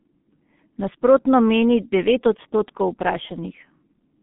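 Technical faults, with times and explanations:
Throughout, G.723.1 codec: heavy coding, fitting roughly 6 kbit/s, removes everything above 3.7 kHz and smears the speech model, leaving muffled, hoarse speech with blurred consonants.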